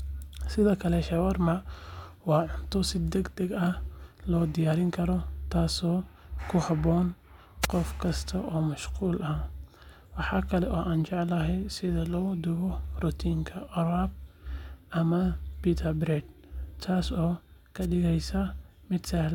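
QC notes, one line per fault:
7.62–7.67 s and 17.81–17.86 s: wireless microphone noise hit. Short static swishes over the speech, as the radio signal fades and receiver noise briefly rises.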